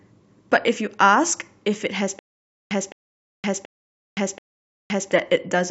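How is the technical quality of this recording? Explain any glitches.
The recording has one clear fault: a stutter with silent gaps running from 2.19 to 5.11 s. The playback or stream likely stalled. On each retry it replayed the last fragment it held and then ran dry. The result is a 211 ms burst of speech repeating four times at a steady 730 ms period, with about 519 ms of dead digital silence after each repeat. The speech that should have filled that span is missing.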